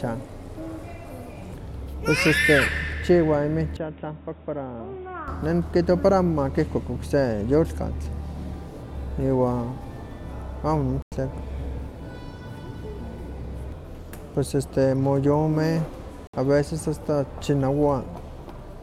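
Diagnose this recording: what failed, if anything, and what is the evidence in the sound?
Between 3.77 and 5.28 s the speech suddenly turns dull and boxy. Nothing comes through above 3.8 kHz, the level drops by about 5 dB, and a new noise floor appears, roughly 30 dB below the signal. There's no gap at the change, so this looks like a driver-level device switch. The likely cause is the input switched to a poorer device, such as a narrower-band mic or a headset's call profile, with its own tone, gain and hiss.

The second problem is at reception: a digital broadcast dropout, which happens twice. The sound mutes at 11.02–11.12 s, a hole of about 96 ms, and again at 16.27–16.34 s, about 64 ms. Both holes are clean silences, not glitches, which points to the receiver muting after losing or rejecting a few frames, roughly three and then two frames of about 32 ms each. Whatever was sent during those holes is simply gone.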